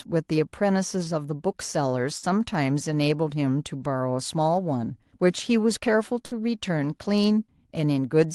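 Speech, marked by two bursts of packet loss, at 2.17–2.26 s and 6.25–6.34 s. In each, the receiver stretches the last sound for about 60 ms while fading it, heard as a brief held buzz or thinning hiss, and then jumps ahead past roughly 60 ms of lost audio. On a spectrogram, each gap shows as smeared, repeating harmonics that dim into a hard restart. The waveform shows a decaying envelope ending in an abrupt discontinuity. The top edge near 12 kHz fits a call codec.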